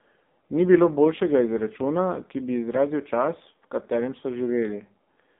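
Speech carrying AMR narrowband mobile codec damage throughout: the band runs only from about 200 Hz to 3.7 kHz, and heavy buzzy, synthetic coloration fits a low AMR-NB mode near 5.9 kbps. Simple telephone band-limiting would narrow the sound without that pulse-driven, vocoded texture.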